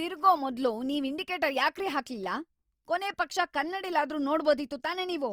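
The speech likely went through Opus compression in music mode, fitting a 24 kbps stream; noise-filled bands leave it plainly grainy and rough across the full band.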